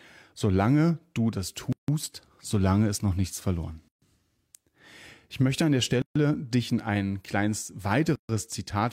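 Gaps at a join of encoded pieces recur every 2 s in the speech: 1.73–1.88 s (about 160 ms), 3.88–4.02 s after "ist noch nichts verloren", 6.02–6.16 s between "möchte an der" and "dich in ein kleines", and 8.16–8.29 s after "dich in ein kleines" (each about 136 ms). Separately encoded pieces were joined with their start delay and end padding left in. Unlike a dropout, nothing is lost: a smeared silence opens, then the speech resumes exactly where it stopped.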